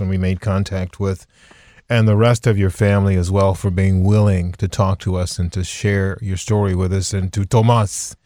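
Throughout the speech there is sample clock jitter: the converter's timing wanders by around a microsecond and a half, so each sample is taken at a slightly wrong moment. The resulting error tracks the waveform's slope and sits roughly 45 dB below the signal, heard as a hiss or roughness that rises on louder and brighter sounds. Unlike a steady noise floor, it disappears in the pauses between phrases.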